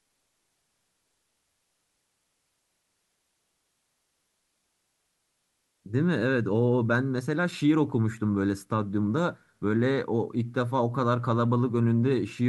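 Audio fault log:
No faults found in the speech at any point.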